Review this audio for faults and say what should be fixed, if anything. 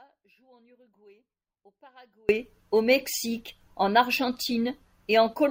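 From the very start until 2.29 s the speech is missing, and all that's there is a faint residue sitting roughly 35 dB below the normal level. That's an audio dropout to a faint residue. The clip opens mid-dropout, and the signal snaps back abruptly at 2.29 s rather than fading in. The likely cause is the feed being lost upstream while everything after the break stayed live. To prevent it, check the cabling and connections before recording and monitor the input level from the first second.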